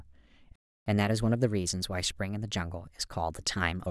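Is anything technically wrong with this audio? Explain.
Yes, two related problems. First, a playback stall: at 0.56 s the speech just cuts out and stays silent until 0.86 s, about 0.31 s of nothing. That's likely the player running dry on data, or its thread getting blocked, so output paused before picking up where it left off.

Right after that, from 0.86 s to 3.86 s, there's catch-up at higher speed. The player resamples its backlog to run at 1.1 times normal speed to recover the lost time, so the speech sounds hurried and sits roughly a semitone and a half sharp before settling back.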